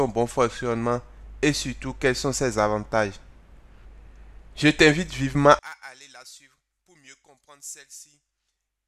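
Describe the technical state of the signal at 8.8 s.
At 8.8 s the signal sits inside a collapse that runs from 5.59 s to the end, where the level falls by about 27 dB and only a faint residue remains. The likely cause is one channel inverted: with one side's polarity reversed, everything common to both channels cancels in the mono sum, leaving only their difference. Unlike a plain volume drop or dropout, the residue is a faint copy missing its centre rather than a quieter whole.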